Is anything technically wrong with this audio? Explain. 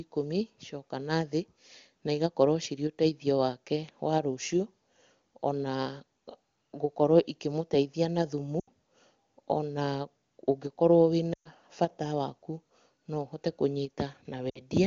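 Yes. The speech dips three times: at 8.60 to 8.68 s, at 11.34 to 11.49 s just before "bata waku", and at 14.49 to 14.60 s. Each gap drops quickly to near silence before the speech returns briefly weak or rough. These are lost AMR speech frames. Radio errors broke a short run of frames, so the decoder repeated the last good pitch and vocal tract settings at falling gain, fading quickly in this wideband stream.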